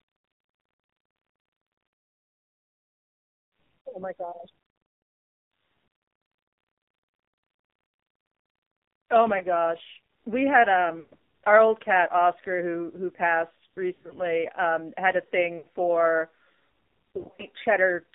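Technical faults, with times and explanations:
Throughout: AMR narrowband mobile codec. The speech passes only from about 200 Hz to 3.7 kHz, and the vocal-tract model is fed very few pulses, so it sounds heavily buzzy and synthetic. That degree of damage fits AMR-NB's low 5.9 kbps mode. On a spectrogram there is a hard ceiling near 3.7 kHz with empty space above it, no energy below 200 Hz, and smeared, grainy harmonics. The waveform looks normal in level.
3.92–4.03, 7.86–7.92, 9.38–9.44, 11.00–11.13, 13.94–14.16, 15.58–15.66 and 17.15–17.42 s: lost AMR speech frames. Corrupted frames leave the decoder repeating its last pitch and tract settings at falling gain, so each gap becomes a short warble, dip or stretched tone. The missing audio adds up to 20 to 160 ms per event, and at 13.94 and 17.15 s it is broken into short scattered runs. A spectrogram shows frozen, fading harmonic bands, and the waveform shows amplitude sagging.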